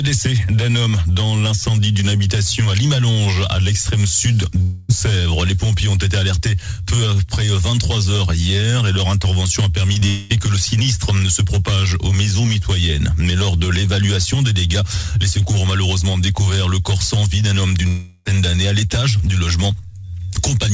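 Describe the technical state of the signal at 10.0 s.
Right around 10.0 s there are two bits of short concealed packet loss, 9.93 to 9.98 s and 10.00 to 10.03 s, each about 20 ms patched by extending the last sound, so you get quick smears. Then from 10.07 to 10.32 s the receiver keeps a fading buzz or hiss going for roughly 220 ms, with no silence, most likely a long network dropout.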